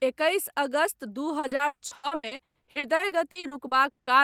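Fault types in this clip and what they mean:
repeated packet loss (robotic sound): choppy speech from 1.39 to 4.10 s, after "एकैस अगस्त दू"; lost packets, up to 120 ms each, are patched by continuing the previous sound.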